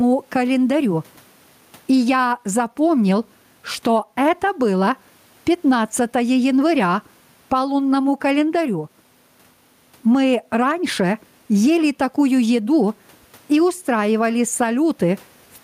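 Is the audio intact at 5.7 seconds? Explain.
No. Gain pumping runs through the whole clip, including 5.7 s. The level swings by around 10 dB, ducking under loud speech and rising again in the gaps. The likely cause is input gain set too high, with a fast limiter pulling it down.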